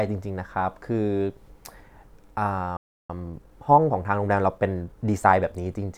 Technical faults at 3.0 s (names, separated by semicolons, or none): playback stall; time-compressed catch-up